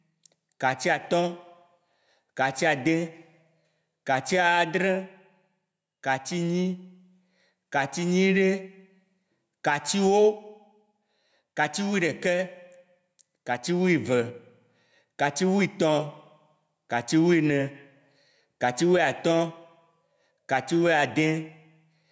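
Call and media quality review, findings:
Gain pumping throughout. Gain swings around 10 dB, pulled down under loud passages. Likely input gain set far too high, fast limiter clamping. Dynamics squashed.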